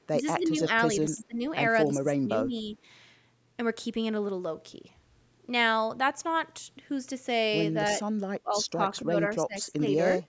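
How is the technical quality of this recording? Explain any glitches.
The recording has two recurring faults: speech suppressed in double talk, and echo leak. The band reaches up to 8 kHz.

Speech suppressed in double talk occurs at 0.12–0.68 s, 1.01–1.41 s, 1.87–2.77 s, 8.43–9.83 s and 10.17–10.21 s. The level dips by about 5 to 20 dB. Likely cause: the echo canceller mistook overlapping talk for echo.

Echo leak appears at 0.4–0.6 s and 7.88–7.95 s. A faint copy, about 20 dB down, returns 285 ms late. Likely cause: loudspeaker echo that was not fully cancelled.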